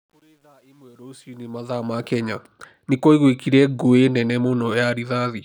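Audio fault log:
0.00–2.09 s, truncation distortion on the fade-in. The fade rises to full level by 2.09 s, but its quiet start is gritty, worst from 0.00 to 1.34 s. Low levels collapse into coarse square steps without dither, which fits a stage keeping only 10 bits.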